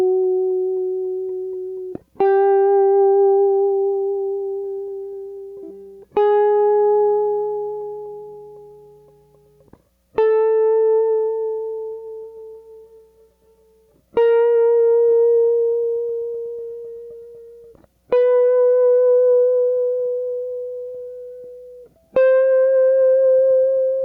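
Gain pumping runs throughout this music clip, with the gain swinging by around 15 dB. The likely cause is input gain set far too high, with a fast limiter clamping each peak and squashing the dynamics.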